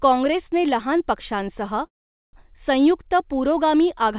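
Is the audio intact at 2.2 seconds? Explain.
No. A call audio freeze runs from 1.86 to 2.35 s, just after "काँग्रेसने लहान पक्षांसह". The last sound is briefly extended, then falls silent for about 0.44 s, likely because delayed packets emptied the jitter buffer. Speech then resumes where it stopped, with nothing lost but 0.47 s added.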